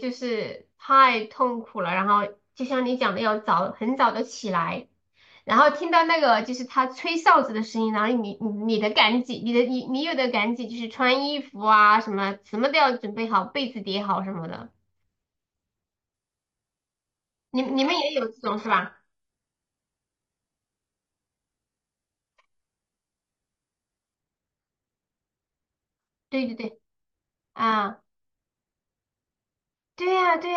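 At 16.14 s the speech suddenly drops to an adaptive stream at a lower bitrate and stays there for 8 s, until 24.14 s. The connection evidently slowed, so the player switched to a much leaner rendition with no gap at the handover. That was a jump from something like AAC at 96 kbit/s down to HE-AAC around 12 kbit/s. Codec artefacts thicken, then the full-quality sound snaps back.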